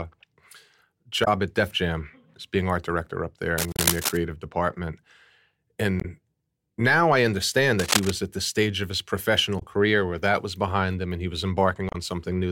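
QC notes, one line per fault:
1.24–1.28 s, 3.71–3.79 s, 6.00–6.05 s, 9.59–9.63 s, 11.89–11.95 s: damaged data in a compressed stream. The decoder misreads corrupted frames and resyncs, giving brief disruptions in the speech. Each shows as a short broadband smear with a waveform discontinuity.
3.58–4.17 s, 7.79–8.13 s: cable scratch noise. Dense, uneven rustling bursts sit at about the speech's own level, likely from a worn contact being moved. They appear as ragged, spiky broadband patches.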